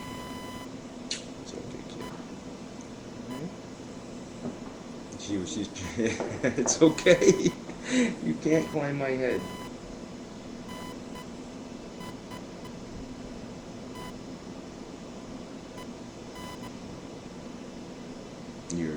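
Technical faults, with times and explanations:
Throughout, computer activity noise: a buzzing, chirping layer sits under the sound, pulsing at roughly a thousand times per second and about 20 dB below the signal. It does not follow the sound itself. It rises and falls with what the computer is doing. Processor, graphics or mouse load changes draw current through the ground the audio circuit shares. That ground shifts, and the shifts leak into the signal path as this rapid, scratchy pulsing.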